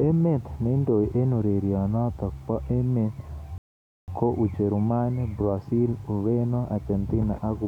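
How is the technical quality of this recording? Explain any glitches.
The speech has one audible fault. A rebuffering stall runs from 3.58 to 4.08 s, just after "eng urerionotok bo emet". Playback ran out of buffered audio and waited, inserting 0.5 s of silence before resuming exactly where it stopped.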